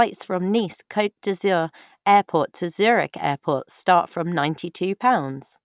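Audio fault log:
Nothing stood out on listening to this speech recording.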